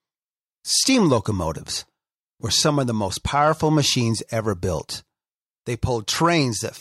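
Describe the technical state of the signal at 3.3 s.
At 3.3 s the signal is intact, with no audible fault at that moment.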